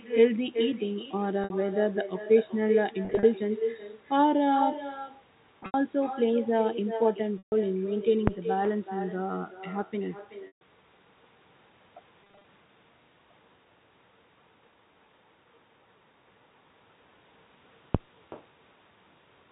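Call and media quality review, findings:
Echo with no canceller, throughout. Every phrase is followed by a quieter, thinner copy about 9 dB down, lagging by a little under half a second, around 400 ms. The far end is playing the call on a loudspeaker and its microphone picks it back up. No echo canceller removes it, so the return rides the full network round trip. Probable component: far-end AEC, disabled or absent.

Packet loss with pitch repetition, at 1.44–1.50 s, 3.05–3.23 s, 5.60–5.74 s, 7.38–7.52 s, 10.47–10.61 s and 12.24–12.44 s. At 1.44 s, 60 ms is lost in one run, heard as a brief held, buzzy tone. At 7.38 s and 10.47 s, 140 ms is lost in one run. The repeated pitch period fades to silence, then the sound cross-fades back. At 3.05 s, 110 ms is lost in short runs scattered over 180 ms, the longest 40 ms. At 5.60 s, 110 ms is lost over 140 ms, the longest run 80 ms. At 12.24 s, 120 ms is lost over 200 ms, in runs of at most 20 ms. 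Mechanism: receiver concealment loops the last pitch cycle across each gap. The pattern fits 10 ms packets. Probable component: network path, jitter buffer.

Phantom power thump, at 8.27–8.40 s and 17.95–18.07 s. A deep thump decays in about 29 ms and 27 ms respectively. A supply is being switched on a live input, and the voltage step passes through the coupling capacitors. Probable component: capture-side mic input or interface power. The G.711 A-law band limit to 4 kHz is audible across the clip.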